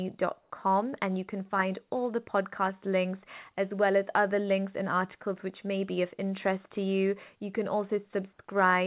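From 0.41 to 0.5 s, just before "and you can find", the natural room background is replaced for about 90 ms by a steady, featureless hiss that shifts in level by about 6 dB. The likely cause is comfort noise in place of the background: the sender's voice detector treated this low-level stretch, about 52 dB below the loudest speech, as silence and stopped transmitting, and the receiver filled the gap with synthetic noise. Throughout the clip nothing reaches above 4 kHz, consistent with a narrowband telephone codec such as G.711.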